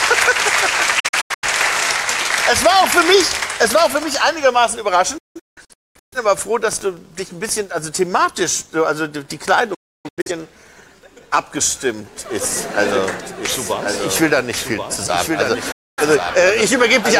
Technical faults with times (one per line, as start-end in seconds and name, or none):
0.99-1.47 digital broadcast dropout
5.18-6.17 digital broadcast dropout
9.74-10.31 digital broadcast dropout
12.85-17.20 doubled audio track
15.71-16.03 digital broadcast dropout